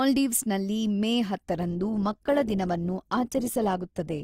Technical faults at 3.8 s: adaptive stream at a lower bitrate

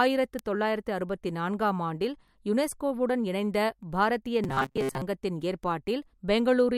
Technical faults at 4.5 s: robotic sound from repeated short buffers

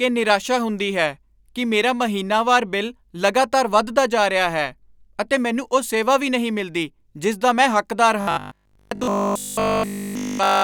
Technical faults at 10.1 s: robotic sound from repeated short buffers

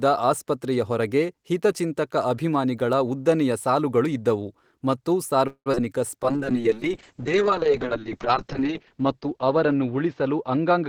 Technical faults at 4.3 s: none

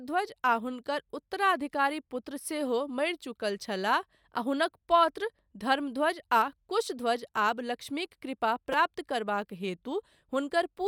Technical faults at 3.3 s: none

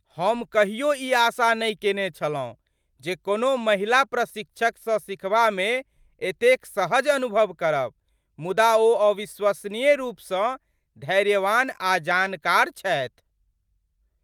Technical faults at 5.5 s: none

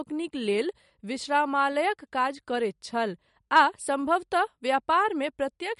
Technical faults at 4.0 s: MP3 compression

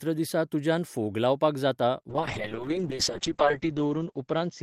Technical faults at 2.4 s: call bitrate drop

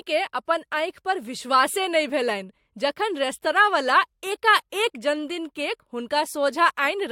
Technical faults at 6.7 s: none

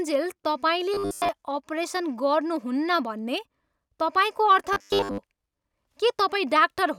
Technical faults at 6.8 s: none

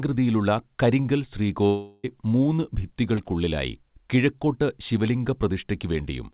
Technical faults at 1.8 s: long network dropout

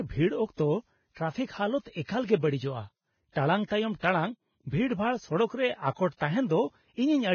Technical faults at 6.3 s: Vorbis compression

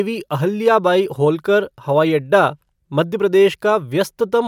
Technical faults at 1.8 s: none

